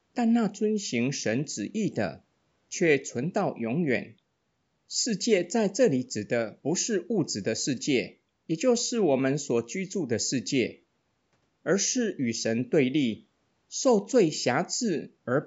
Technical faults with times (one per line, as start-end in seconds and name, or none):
none